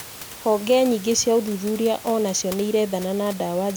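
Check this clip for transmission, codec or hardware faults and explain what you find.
No transmission, codec or hardware faults can be heard in the clip.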